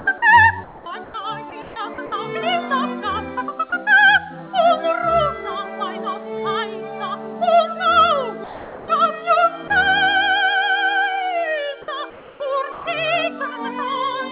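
A voice detector at the sending end was likely misjudging the audio as background and cutting transmission, with the receiver filling gaps with comfort noise. Sound dropped by the voice detector occurs at 0.00–0.06 s, 8.44–8.88 s, 9.68–9.70 s and 12.72–12.86 s, where the audio briefly gives way to steady noise or near silence before returning. Comfort noise in place of the background appears at 0.64–1.14 s and 12.1–12.4 s, likely from discontinuous transmission during pauses, replacing the real background with a featureless hiss, about 3 dB quieter in the later stretch. From 1.50 to 2.12 s the detector likely toggled repeatedly, so the sound is chopped by the voice detector, with holes totalling about 0.26 s. Across the clip nothing above 4 kHz is present, which points to a G.711 call codec at 64 kbps.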